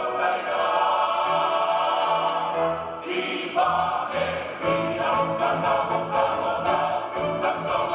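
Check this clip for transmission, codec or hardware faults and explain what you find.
No transmission, codec or hardware faults can be heard.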